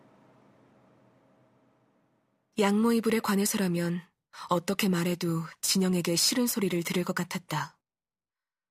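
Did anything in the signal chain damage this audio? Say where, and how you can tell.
Yes. A fine hiss and roughness rides on the speech throughout, growing on loud and sibilant passages and vanishing in pauses. This points to sample clock jitter at the converter: a clock wandering by a few microseconds mistimes steep waveform slopes, leaving errors roughly 25 dB below the signal.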